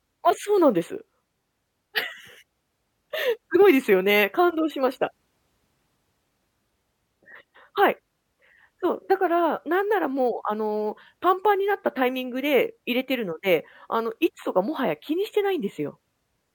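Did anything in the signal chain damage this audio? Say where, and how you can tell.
No, nothing in the signal chain damaged this audio.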